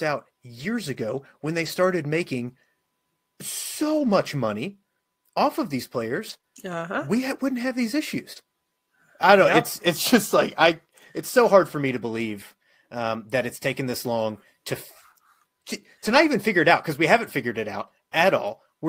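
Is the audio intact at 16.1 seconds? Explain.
No. From 16.06 to 16.16 s there is a lost packet rebuilt from error correction, just before "even figure it out". There is no gap. About 60 ms of audio sounds rougher and noisier than its surroundings, which fits a few lost packets. Each following packet carried a low-bitrate backup copy of the missing one. The decoder played those copies in place of the originals. That keeps the sound continuous but coarser for that short stretch.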